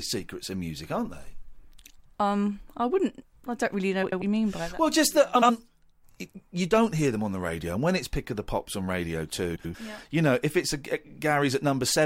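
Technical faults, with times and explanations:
4.03–4.22 s, 5.35–5.50 s and 9.55–9.75 s, frames out of order: after "wouldn't I don't really", after "just that" and before "yeah you know if", two adjacent blocks of about 93 ms (70 ms at 5.35 s) play swapped. The halves come out exchanged, giving a garbled flutter; no time is lost.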